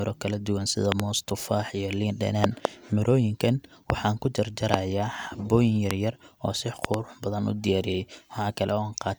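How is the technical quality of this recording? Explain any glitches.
Loud pops interrupt the speech six times, standing about 20 to 25 dB above it while the talking continues underneath. Double thumps land at 0.92–1.02 s, at 2.44–2.67 s just after "moos tufaax iyo liin", and at 6.85–6.96 s just after "oo si". Single sharp pops fall at 3.90 s, 4.74 s, and 5.91 s, just before "oo si". These are likely voltage spikes from a connector, switch, static discharge, or driver glitch, which the following circuitry shapes into brief clicks.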